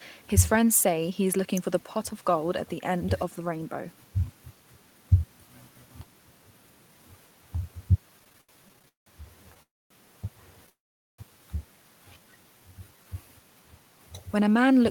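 Speech, marred by four network faults. From 8.19 to 9.08 s there are repeated stalls (stutter). The sound halts thirteen times, the longest for 179 ms. About 371 ms is filled in, roughly 42% of that span. Packets kept arriving late, so the jitter buffer kept running dry. Nothing is lost, but the speech drags. Two call audio freezes follow, at 9.63 to 9.92 s and 10.70 to 11.20 s. Each time the last sound is held briefly as a fading buzz or hiss, then drops to silence. The silence lasts about 230 ms, then about 430 ms. Speech then resumes where it stopped. The gaps add 278 ms and 488 ms of delay. The likely cause is packets held up in transit, emptying the buffer. From 12.05 to 13.10 s a jitter buffer slow-down adds 187 ms. Speech plays at 83% speed at unchanged pitch, stretching sounds out. The receiver was rebuilding its reserve.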